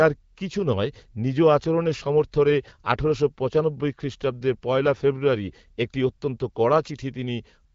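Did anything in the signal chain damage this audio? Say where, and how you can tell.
No, nothing damaged this audio.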